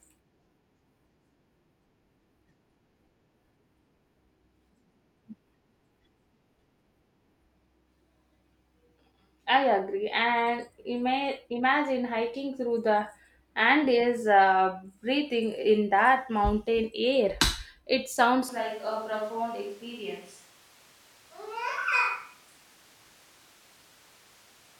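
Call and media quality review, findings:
Close mic likely dropped, switch to a distant microphone at 18.49 s, persisting to end: speech abruptly roomy and hollow, thinner low end, level down about 5 dB, room noise about 25 dB under speech.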